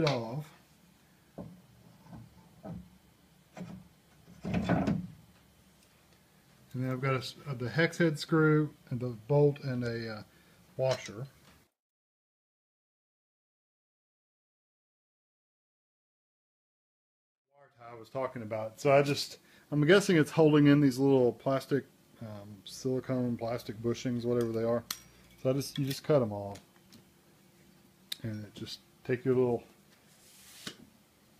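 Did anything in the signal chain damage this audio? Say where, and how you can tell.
Yes, there's a mains buzz from about 22.67 s to 25.94 s, and it points to the analogue wiring stage. It's a steady, raspy buzz sitting well below the main signal, roughly 35 dB down, built on 60 Hz with a stack of harmonics climbing into the kilohertz range. That edgy texture comes from sharp spikes leaking in twice per mains cycle, the kind a dimmer, a rectifier or a poorly shielded cable lets through.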